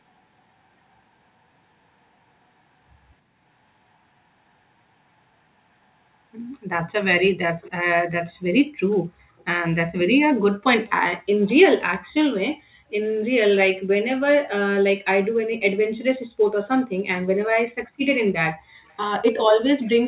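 A far-end echo canceller likely let loudspeaker pickup through, producing an echo leak at 7.61, 8.91, 9.38, 10.86, 18.86 and 19.81 s: faint copies of the speech, delayed 286 ms, about 20 to 35 dB below it.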